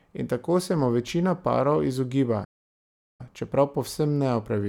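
A playback stall from 2.44 to 3.21 s cuts this speech clip dead for about 0.75 s after "mu večina parov izogiba", resuming at "čeprav povsem"; likely the player starved of data.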